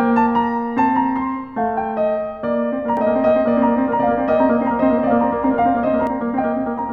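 A doubled audio track runs from 2.97 to 6.07 s: the music is joined by a second, equally loud copy trailing about a second behind, likely from a slower second capture path or mis-aligned edit. The copy is dry, full-band, and starts and stops abruptly.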